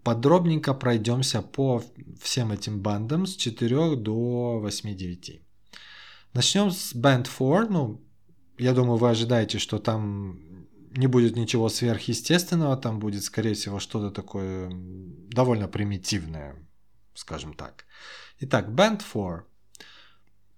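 No technical faults can be heard anywhere in the speech. Nothing in the recording or playback chain intrudes on it at any point.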